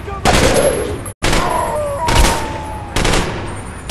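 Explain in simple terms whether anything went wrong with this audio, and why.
Something did go wrong, for a moment. At about 1.11 seconds the sound quickly fades out and goes silent. It comes back at about 1.25 seconds. This is a digital broadcast dropout. The receiver stopped getting good data, so it muted itself rather than play garbage. The fade takes about 20 ms. The gap holds roughly 85 ms of missing sound, which fits a couple of lost frames. That missing part never returns.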